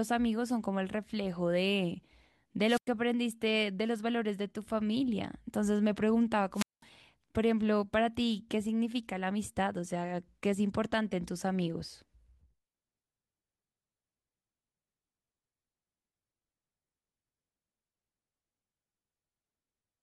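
At 2.66 s and again at 6.53 s the speech suffers a wireless microphone squelch dropout. The radio link weakens, hiss swells briefly, and the receiver's squelch then mutes the output, leaving a hole of 97 ms in the first event (ending by 2.90 s) and 200 ms in the second (ending by 6.84 s) before the speech returns. The swelling hiss before each mute sets this apart from a digital dropout, which cuts to silence abruptly.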